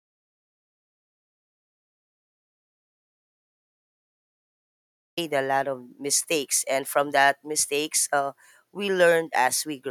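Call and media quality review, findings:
Audio dropout to silence from 0.0 s to 5.17 s, already under way at clip start; speech enters abruptly mid-flow. Likely input loss (device, link or mute) with the encoder writing silence. Unlike a noise gate or suppressor, the gap holds no room tone or fade, just silence, and the content is unrecoverable.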